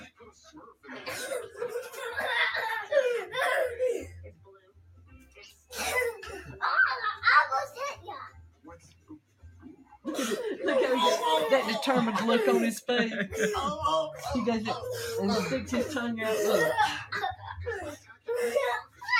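A noise suppressor applied to music or sounds stays active throughout, treating sustained content as noise and pumping the level by roughly 5 dB. Sound cut by the noise suppressor occurs at 4.34–5.37 s, 5.53–5.71 s, 8.37–9.64 s, 9.80–10.05 s, 17.96–18.28 s and 18.84–19.02 s. In those spans, held material sinks by about 11 to 12 dB.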